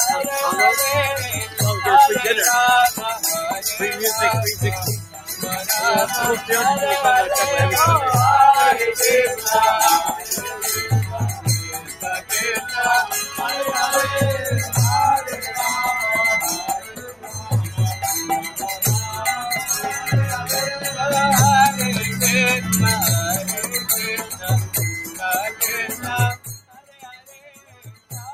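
A noise suppressor meant for speech runs across the whole clip, treating steady tones, ambience and reverb as noise and pulling them down while sharp onsets pass. The gain it applies keeps shifting by something like 10 dB, so the level pumps and tails thin out. On a waveform the envelope breathes unevenly after each attack; on a spectrogram sustained bands and decays fade early and patchily while transient columns stay bright.

Within that, the suppressor cuts particular stretches harder, where steady or decaying sound was taken for noise. This happens at 1.46–1.61 s (down about 8 dB), 5.00–5.43 s (about 13 dB), 9.36–12.32 s (about 12 dB), 15.27–15.50 s (about 6 dB), 16.79–17.52 s (about 13 dB), 18.45–18.60 s (about 10 dB) and 24.21–28.12 s (about 14 dB). Each sounds like the sound sinking or its decay being chopped short. The waveform shows the envelope dipping abruptly, and the spectrogram shows matching darkened patches across the sustained energy.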